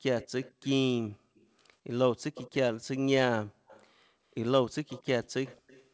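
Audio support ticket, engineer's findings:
Echo leak: far-end loudspeaker pickup likely not fully removed by that side's echo canceller, residual sent back into the call. Delayed copy of the speech at 0.20–0.68, 1.35–1.48, 2.35–2.55, 3.67–3.87, 4.88–5.07, 5.24–5.29 and 5.45–5.89 s. Lag 195 ms in first burst, 228 ms thereafter. Level varies from about 35 dB below the speech to about 15 dB below. Audio stops at 8 kHz, consistent with a wideband call codec.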